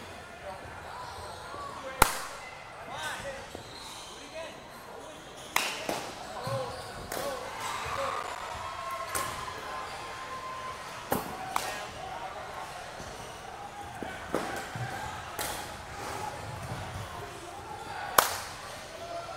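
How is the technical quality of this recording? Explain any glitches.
The recording has one glitch: a burst of processor overload crackle from 7.95 to 8.50 s. The processor missed the deadlines for a dozen or more buffers of a few milliseconds each, and each miss left a short, hard-edged silent gap. Packed together, these gaps make a gritty tearing sound. Isolated dropouts would sound like separate clicks or holes, but here the rapid cluster stops abruptly when the load eases.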